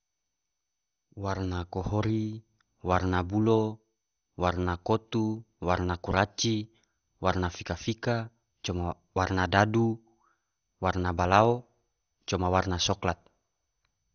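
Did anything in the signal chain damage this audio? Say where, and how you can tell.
Yes, at the codec stage, throughout the whole speech clip. The audio is dull, with nothing above about 6.5 kHz, and carries a plainly audible gurgling, granular roughness that points to MP2 compression. This is likely a Layer II encode starved of bits, which fits a low rate around 48 kbps. The coder divides the spectrum into 32 sub-bands and drops the upper ones when bits run short, while the bands it keeps are coarsely quantised, producing that grainy texture.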